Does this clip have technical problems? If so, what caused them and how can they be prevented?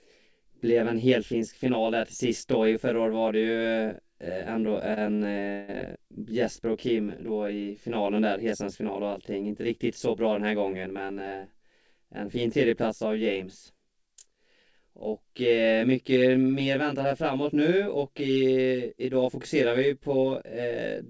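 Yes. Three kinds of fault are audible in this speech clip.

Channel delay (comb filtering) runs through the whole clip. One channel is late by roughly 20 ms, and when the two channels are summed to mono, the shared content cancels at evenly spaced frequencies starting down around 20 Hz. That fixed notch pattern gives the speech a rough, slightly doubled colour throughout. This is audible alongside the call path's band limit, which removes everything above 8 kHz. Prevention: align the channels, or capture and send a single mono channel instead of summing a delayed pair.

Repeated stalls (stutter) occur between 4.94 and 5.70 s. Packets arrived late, so the jitter buffer ran dry four times in quick succession. Each time, the receiver extended the last sound until new audio came in. About 253 ms was filled this way, a third of that span, and the longest single hold was 159 ms. Nothing is lost, but the speech drags and catches. 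Prevention: reduce network jitter or allow a larger jitter buffer target.

Jitter buffer speed-up appears twice, from 10.66 to 11.31 s at 111% speed and from 16.94 to 17.69 s at 107%. In each case the buffer was holding more audio than its target, likely after delayed packets arrived in a burst. The receiver trimmed short pitch-period pieces, roughly 70 ms per event, so the speech sounds hurried while keeping the same pitch. Prevention: stabilise packet delivery so the buffer does not overfill and need draining.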